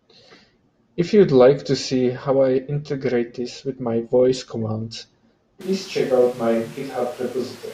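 At 5.61 s the speech turns abruptly roomy and hollow, with thinner bass, a drop of roughly 5 dB and noticeably more background noise, through to the end. This is a switch to a distant microphone, likely after the close microphone's signal dropped out.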